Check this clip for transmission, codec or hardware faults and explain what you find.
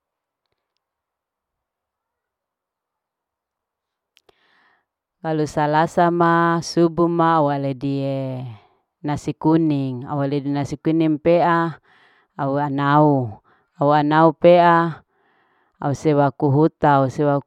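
I found no transmission, codec or hardware faults in the clip.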